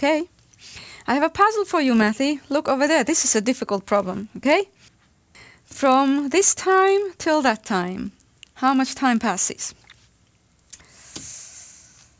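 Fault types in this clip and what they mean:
Resampler restarted on every block: each 20 ms block was converted on its own (the downsampling points to 48 kHz to 16 kHz), so every block edge lacks true neighbouring samples and carries a small error, heard throughout as a 50 Hz buzz riding on the sound.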